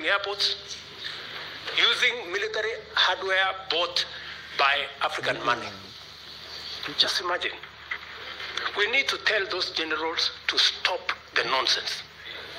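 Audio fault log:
No faults detected in the audio.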